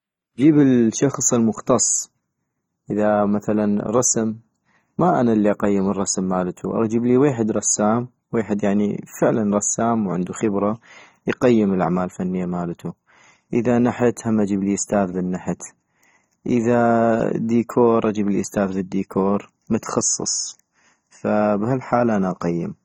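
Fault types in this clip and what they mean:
AAC compression: The speech sounds dull and smeared all the way through, with a warbling, fizzy texture on sustained sounds and sibilants. The cause is likely low-bitrate AAC-LC coding. The encoder breaks the audio into blocks of frequency lines and quantises them coarsely against a model of hearing. Bands it cannot afford are thinned out or patched with substitute noise. Nothing is present above 17.8 kHz. The damage is plainly audible, which fits a rate near 24 kbps.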